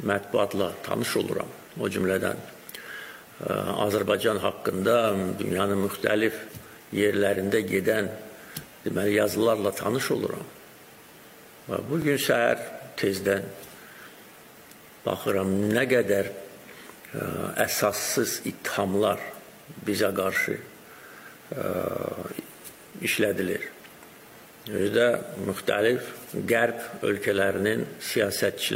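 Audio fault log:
12.02–12.04 s, 18.04–18.07 s and 24.07–24.09 s, overlapping chunks: the audio was handled in 6.0 s blocks, and each new block begins about 23 ms before the previous one finished, so the last 23 ms of each block is heard a second time. At each join the waveform jumps back and repeats, giving a brief stutter or click that recurs every 6 seconds.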